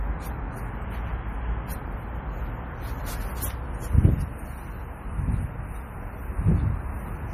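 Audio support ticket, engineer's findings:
Watery, swirly texture throughout; nothing above 15.2 kHz. Likely MP3 compression, sound fitting about 40 kbps. Starved encoder cuts the treble and drops weak frequency lines.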